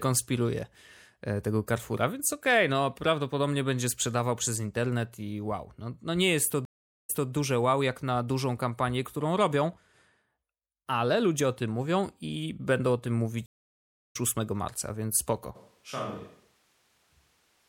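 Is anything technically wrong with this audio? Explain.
Yes, there are two stream reconnects and a microphone change in this speech clip.

At 6.65 to 7.30 s, just after "no nie jest to", the stream reconnects. The connection dropped, the player went quiet for 435 ms, then restarted its decoder. The server resent a bit, so "wow jak na dużą" arrives after a 209 ms repeat. At 13.46 to 14.16 s, after "i będą o tym", there's a 687 ms gap, and the audio picks up roughly 0.4 s further on, so a chunk is skipped.

From 15.57 s to the end, the sound suddenly turns roomy and hollow, thinner in the bass and roughly 10 dB quieter. Room noise sits only about 30 dB under the speech. That's likely a switch to a distant microphone after the close one dropped out.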